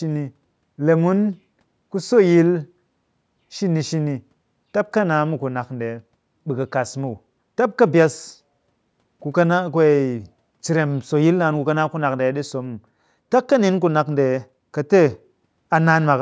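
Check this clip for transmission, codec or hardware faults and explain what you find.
Nothing here points to a transmission, codec or hardware problem; the speech has simply passed through ordinary call microphone processing, which trims the deepest bass and leaves nothing above 8 kHz, exactly as that path is meant to.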